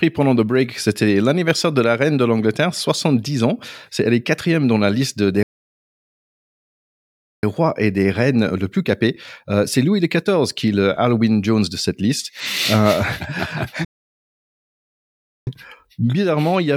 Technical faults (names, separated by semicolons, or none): playback stall